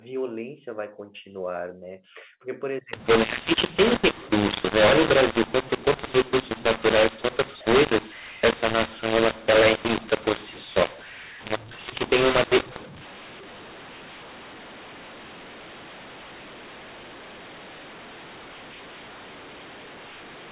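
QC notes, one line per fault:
2.93–20.51 s: mu-law and A-law mixed up. The telephone speech was coded on the A-law curve but decoded on the mu-law curve, so sample levels are remapped wrongly. Some come out too loud, others too quiet, and near-silent samples are lifted, leaving the speech harsh and distorted and filling the pauses with noise.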